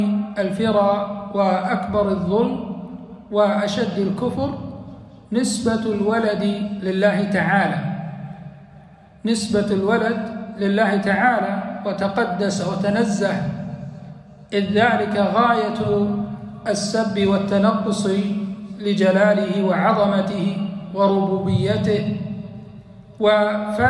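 The signal holds steady throughout, with no audible technical faults anywhere in the recording.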